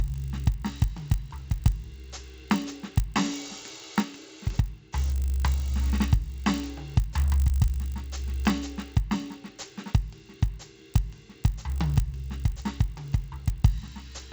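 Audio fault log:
Throughout: resampler restarted on every block. Each 20 ms block is converted separately, causing edge errors heard as a 50 Hz buzz. Spectrograms show faint vertical lines every 20 ms.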